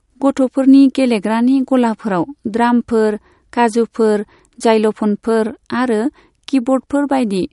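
From start to finish the speech has a watery, swirly quality, and there's nothing at all above 11.2 kHz, so the s sounds lose their air and come out a bit metallic and chirpy. That's likely MP3 compression at a low bitrate, somewhere near 49 kbps. The encoder ran short of bits, so it chopped off the treble and kept switching faint frequency detail on and off between frames, which also softens the consonant attacks.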